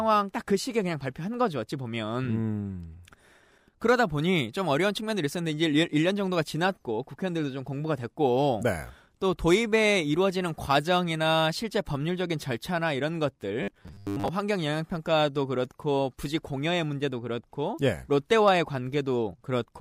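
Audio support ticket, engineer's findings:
Robotic sound from repeated short buffers, 13.63 to 14.29 s. Speech collapses into a rigid metallic buzz at 100 Hz. About half the audio is repeats. Likely a starved playback buffer looping its last block. 100 Hz fits 10 ms blocks.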